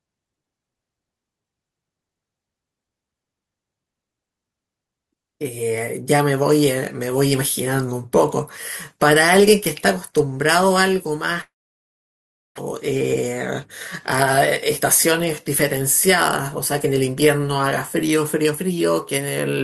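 A speech clip with a gap followed by two faster stretches. From 11.41 s to 12.59 s the sound stops. A brief fading buzz continues the last sound, then about a second of near silence follows. When the speech returns, about one second of it is simply missing. This is likely a long network dropout. The receiver filled the gap with concealment, then gave up, and the delay shifted by roughly a tenth of a second or more. Two jitter buffer speed-ups follow. From 12.95 s to 13.35 s the speech runs at 107 percent, and from 16.56 s to 17.17 s at 106 percent. Pitch stays the same, but the speech sounds slightly hurried. Each time the receiver trimmed short pitch-period pieces, about 40 ms in total, to drain the excess buffered audio.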